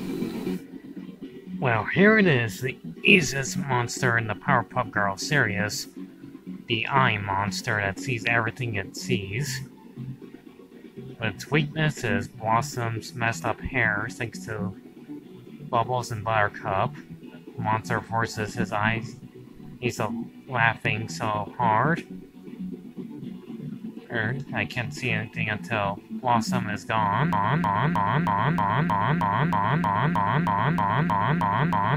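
At 27.33 s a broken-record loop begins: a fragment of about 314 ms repeats back to back, identically, 15 times, and continues to the end of the clip. The exact repetition at a fixed interval is likely the result of the player, encoder or stream stalling and resending the last fragment it held. Whatever audio belonged to those final seconds is missing, replaced by the same short segment cycling without change.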